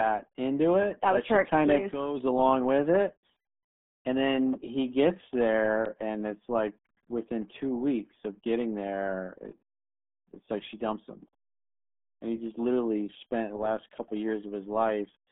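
From start to finish, the speech carries the RealAudio 14.4 codec sound: squeezed into roughly 150 Hz to 3.5 kHz, nothing above 3.7 kHz, heavily gargly and muffled, which fits an 8 kbit/s dial-up stream.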